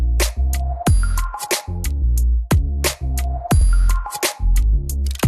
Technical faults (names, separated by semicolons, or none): repeated frames